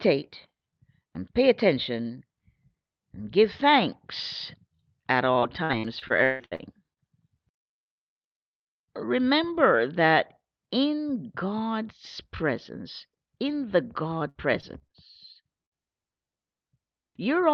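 Speech heard through a call connection whose top end stops at about 8 kHz, consistent with a call codec such as Opus, turns choppy and robotic from 5.39 to 6.99 s and again from 14.29 to 14.92 s. These are repeated packet loss: nine gaps in the first stretch (longest 155 ms, roughly a quarter of the span patched) and four in the second (longest 57 ms), each filled by extending the previous sound. At 15.66–15.73 s a short burst of packet loss leaves a brief held, fading sound before the audio resumes with about 60 ms missing.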